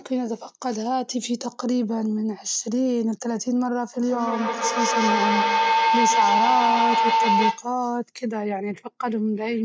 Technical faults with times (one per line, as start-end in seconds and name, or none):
4.01-7.74 feedback howl